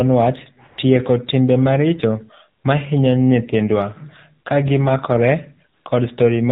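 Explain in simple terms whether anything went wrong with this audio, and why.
The whole clip went through the AMR narrowband mobile codec, the speech coder used on older mobile calls. Everything above 4 kHz is gone, so the speech sounds muffled. Squeezing it into so little data leaves a clearly buzzy, synthetic edge.

AMR comfort noise appears twice, from 0.68 to 0.78 s and from 5.74 to 5.86 s. The phone decided nobody was talking and stopped sending speech. The receiver filled those short gaps with smooth, artificial hiss instead of the real background.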